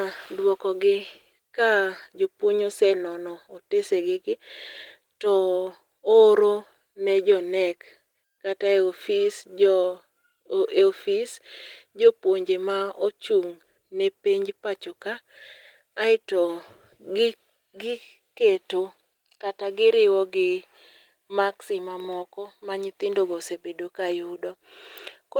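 Nothing stood out as a technical problem on listening to this speech recording.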